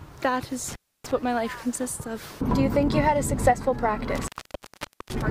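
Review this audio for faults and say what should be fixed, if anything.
An intermittent contact in a cable or plug opens at 0.68–1.11 s (about 290 ms) and 4.15–5.22 s (about 830 ms), cutting the sound with crackle at each edge. Replace or reseat the suspect cable and connectors, and strain-relieve them so they cannot shift.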